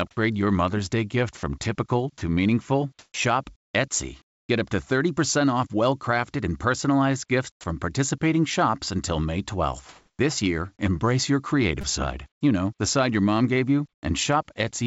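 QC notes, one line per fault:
0.11–0.17 s, 1.37–1.43 s, 7.52–7.64 s: sound dropped by the voice detector. Brief gaps of 60–120 ms fall to flat noise, likely because the detector misread the sound as background.
2.99–3.14 s, 4.22–4.49 s, 9.89–10.19 s: comfort noise in place of the background. Room tone becomes steady featureless hiss, about 7 dB up, about 14 dB down before "up to", then about 6 dB up.
3.12–3.14 s: onset clipped by the voice detector. After "typical to meaningful" the next sound starts abruptly, its first 20 ms replaced by filler noise, likely because the detector reopened late.
11.81–11.83 s: repeated buffer. A roughly 5 ms slice plays four extra times as a short buzz with hard joins, consistent with a small playback buffer starved of new audio.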